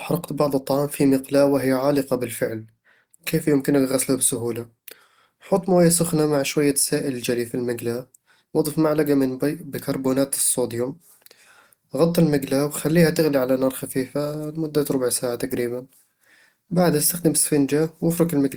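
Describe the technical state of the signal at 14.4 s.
At 14.4 s the speech signal is intact, with no dropout, clipping, glitch or other technical fault at that moment.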